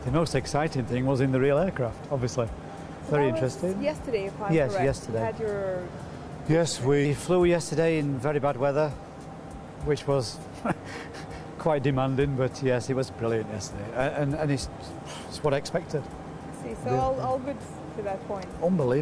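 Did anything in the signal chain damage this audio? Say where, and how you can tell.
Yes. From 5.38 to 7.05 s the sound sags: it slows to about 0.92 times its proper speed and drops roughly 1.5 semitones, with pitch and tempo shifting together before snapping back. That locked pairing points to a wrong sample rate at the playback or converter clocking stage. The samples were clocked out slower than they were captured, with no resampling. The ratio fits 24 kHz material played at 22 kHz.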